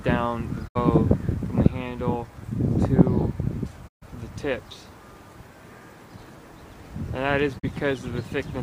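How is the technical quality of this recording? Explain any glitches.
The recording has three short silences where the sound briefly fades out and comes back, each a digital broadcast dropout.

At 0.67 to 0.77 s the audio dips to silence over about 20 ms and returns after a gap of roughly 64 ms. The receiver lost the signal or rejected corrupted frames and muted until clean data resumed. The gap fits about two frames of 32 ms, and the audio sent during it is gone.

At 3.87 to 4.04 s the same quick fade and hole recur, this time the longest, with about 128 ms missing, which points to four lost frames. The muting again follows failed reception, and the sound picks up later without the material in between.

At 7.58 to 7.65 s a brief 32 ms hole appears, consistent with a single dropped frame. The 20 ms fade softens the cut into a quick duck rather than a click before the audio returns.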